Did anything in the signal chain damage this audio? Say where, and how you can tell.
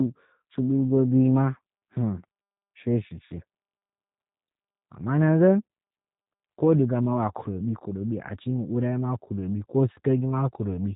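Yes, at the codec. G.729 coding runs throughout. Nothing passes above 3.8 kHz. Speech sounds rough and synthetic, rebuilt from a pulse model, which fits an 8 kbit/s coder.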